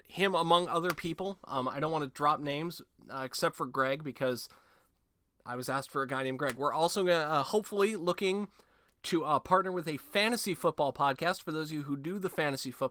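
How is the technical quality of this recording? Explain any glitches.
No glitches; the recording has no technical faults.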